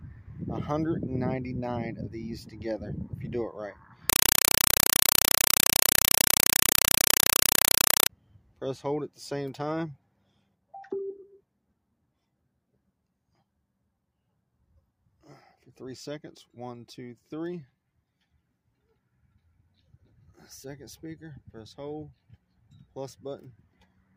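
From about 4.1 to 8.1 s the sound is replaced by harsh, very loud chattering static, which is a compressed stream played as audio. The receiver treats the bitstream as plain samples, so each short burst of about 4 ms repeats at roughly 31 Hz, which fits an AC-3 stream left undecoded.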